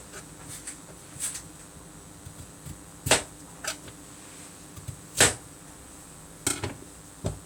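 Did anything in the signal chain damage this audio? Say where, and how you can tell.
Yes, there's a DECT cordless phone buzz in the analogue wiring, running the whole clip: a thin 100 Hz buzz, about 25 dB down, from nearby radio bursts getting rectified.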